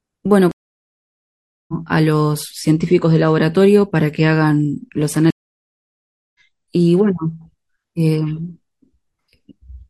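Twice the stream reconnect fault occurs: the connection dropped, the player fell silent, then reconnected and restarted its decoder partway through the live feed. From 0.51 to 1.74 s the speech cuts to about 1.17 s of silence and resumes around one and a half seconds further on, so that stretch is simply missing. From 5.30 to 6.40 s it happens again, with about 1.04 s of silence and a jump of roughly a second.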